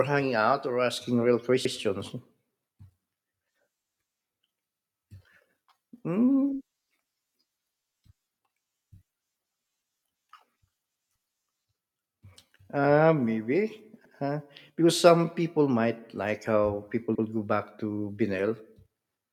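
Speech with overlapping chunks: at 1.65 s, 7.85 s, 14.05 s and 17.15 s, about 100 ms of audio plays twice, heard as a short stutter or click. The first comes right after "out or asking real", the last between "might like how people" and "go back". The audio was handled in 3.0 s blocks, each starting before the previous one ended, so the overlap is replayed at every join.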